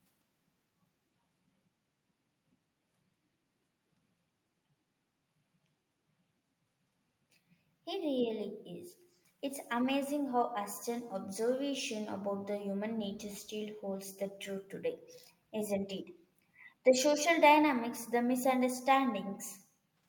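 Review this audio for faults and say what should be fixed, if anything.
Background gated by the echo canceller: the room sound dips about 12 to 15 dB at 2.87–3.02, 3.55–3.71, 4.37–4.48, 5.63–5.74, 6.65–6.99 and 7.6–7.71 s. The canceller clamps the microphone while the loudspeaker plays.

Echo leak: a faint copy of the speech, about 40 dB down and 246 ms late, appears at 9.13–9.19 s. The likely cause is a loudspeaker echo the canceller failed to fully remove.

A headset, or a better-converged, gentler echo canceller, would prevent both.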